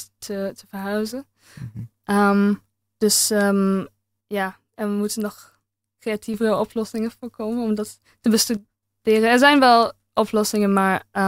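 At 4.21 s the speech and its background noise drop together by about 6 dB, recovering at 6.34 s; at 8.57 s they drop by about 9 dB until 8.83 s. This sudden gain jump, likely an unramped digital gain change, differs from compression because the level steps instantly rather than gliding.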